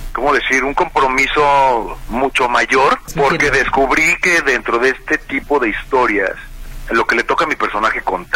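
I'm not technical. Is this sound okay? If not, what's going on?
Yes, this sound is okay, and nothing in it needs fixing. Listening closely turns up no technical problems anywhere in the clip.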